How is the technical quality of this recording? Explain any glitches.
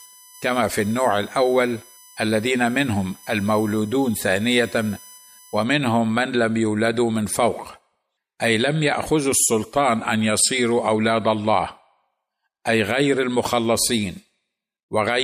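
The recording has one clear fault, a USB whine from 0.0 to 5.63 s. Current drawn in 1 ms USB frames leaks through power or ground, producing a fixed 1 kHz tone with harmonics strongest at 18 kHz, roughly 20 dB below the speech. A spectrogram shows steady horizontal lines that stop abruptly.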